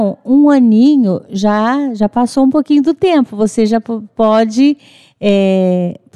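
A short speech clip with one sharp click at 2.24 s, likely dropped samples: roughly a single sample goes missing, so the waveform jumps abruptly.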